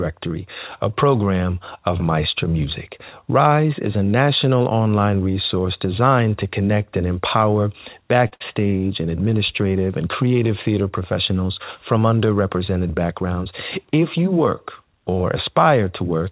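Short stalls from a late packet happen twice back to back, at 8.28 to 8.34 s and 8.34 to 8.42 s, after "to connect and empower" and before "and administrative and creative". The jitter buffer ran empty each time, so the last sound was stretched by 38 ms and then 64 ms until the packet arrived. Playback resumed from the same place, so nothing is lost, but a sound is held too long. The call path carries nothing above 4 kHz, which fits a narrowband G.711 codec.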